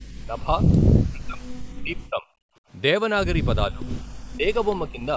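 Speech suppressed in double talk affects the talker at 0.19 to 0.53 s, 0.99 to 1.46 s and 1.73 to 2.26 s. The voice sinks by roughly 30 to 40 dB. The most likely cause is that the far side was talking at the same moment, and the echo canceller, unable to tell the local talker from loudspeaker echo, turned everything down together.

Background gated by the echo canceller follows at 2.54 to 2.65 s. The room sound drops by about 26 dB for a brief stretch of around 70 ms and then returns. The canceller clamped the microphone hard while the loudspeaker was playing, so even the ambience vanished until it released.

Double-talk suppression returns at 3.70 to 3.87 s with a shallower dip of roughly 20 dB. Right after it, from 3.89 to 4.02 s, comes an echo leak. A delayed copy of the voice, lagging by 420 ms and sitting roughly 15 dB below the speech, slips through as a short scrap. Some of what the loudspeaker put into the microphone likely escaped the canceller and was sent back.

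The longest double-talk stretch runs from 4.03 to 5.11 s. The voice is pushed down by around 35 dB across about 0.7 s in total, over a band that stops at 8 kHz.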